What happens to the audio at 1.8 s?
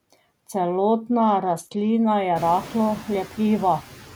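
At 1.8 s the sound is near the end of a Bluetooth SBC bit pool drop that runs from 1.10 to 1.90 s and clears just before "je rahlo". The link squeezed its data rate, which fits a bit pool falling from 28 to 11, around 90 kbps. The top sub-bands lose their bits, so the treble goes dull while gritty quantisation noise rises. Unlike a plain low-pass filter, the grit comes with the dullness and both vanish once the rate recovers.

Noise suppressor artifacts are also present here, as they are throughout. The suppressor pulls the noise down by about 13 dB between syllables and lets it back up under them. Unlike a noise gate, this tracks frequency bands frame by frame rather than switching everything on and off.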